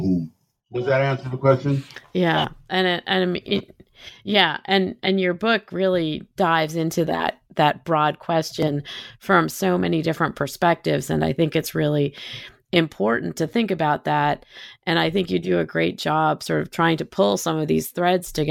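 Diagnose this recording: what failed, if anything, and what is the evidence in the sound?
Nothing in this recording points to a failure at any stage of the signal chain. The speech runs without a break, and nothing in the sound suggests anything went wrong.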